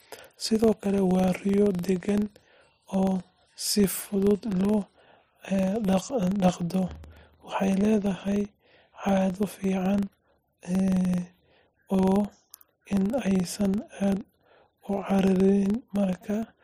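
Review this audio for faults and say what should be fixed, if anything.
A filter restarted on every block runs through the whole speech clip as a low buzz at about 23.4 Hz. At each block boundary the filter forgets its state and starts again from silence, so every block opens with a small transient. The 23.4 Hz rate fits a 2048-sample block. The buzz rises and falls with the speech level. A spectrogram shows thin vertical lines about 43 ms apart, brighter where the speech is loud. The waveform shows small steps or spikes at each boundary. To prevent it, keep the filter's internal state from one block to the next instead of resetting it.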